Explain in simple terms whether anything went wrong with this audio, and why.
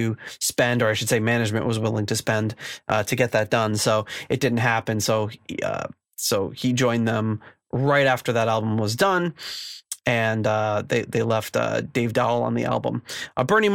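Nothing went wrong with this recording of speech; no technical faults can be heard anywhere in it. The sound comes through steadily, with no breaks, glitches or sudden changes along the way.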